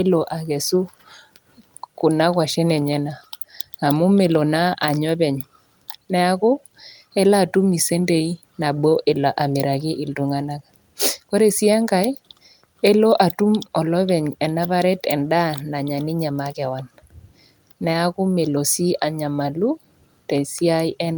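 No technical faults can be heard anywhere in the recording. Nothing in the speech needs a timestamp or a comment.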